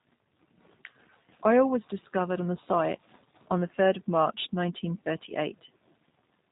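From start to finish the speech carries G.729 codec damage. The codec discards the waveform and resynthesises each 10 ms frame from a vocal tract filter, pitch predictor and sparse pulses, which fits an 8 kbit/s G.729A stream. The result is plainly rough and synthetic, with nothing above 3.8 kHz.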